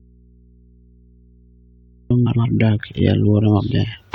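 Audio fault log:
0.00–2.11 s: audio dropout to a faint residue. The speech is already missing when the clip opens and returns abruptly at 2.11 s. The gap holds only mains hum, about 40 dB below the speech. This likely means the signal was lost while the input stayed live.
2.26–2.46 s: frames out of order. Two neighbouring blocks of about 93 ms play swapped, which fits runs of four frames each. The stretch sounds like a garbled flutter. It ends just before "dak e". No time is lost.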